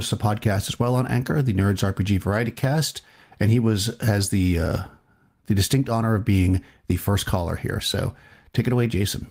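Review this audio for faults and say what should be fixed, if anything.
Nothing needs to be fixed, as no faults can be heard in the audio.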